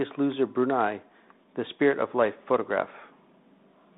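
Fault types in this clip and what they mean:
No faults are present in the clip. The speech sits in a telephone band of about 200 Hz to 3.7 kHz, carried by G.726 ADPCM at 32 kbit/s, which leaves only a light coding grain on it.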